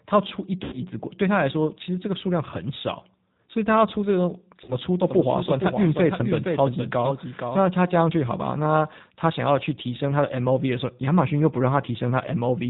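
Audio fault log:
Throughout: G.729 codec. The speech is band-limited, with nothing above 4 kHz, and has a rough, slightly synthetic grain from being rebuilt out of a vocal tract filter, pitch predictor and sparse pulses at 8 kbit/s. Unlike plain low-pass filtering, the roughness sits inside the voice itself.
0.64–0.75 s and 4.64–4.77 s: VoIP packet loss concealed by the speech codec. About 80 ms, then 40 ms, of audio went missing. The decoder stretched its last pitch and filter into a fading buzzy tone or coloured noise, and the voice stays weak briefly after. This differs from a dropout's clean silence.
5.06–7.60 s: doubled audio track. A second, full-band copy of the speech runs about half a second behind, roughly 5 dB quieter. It starts and stops abruptly and has no decay or room colouring, which sets it apart from a reverberant echo. This likely comes from a second, slower capture path.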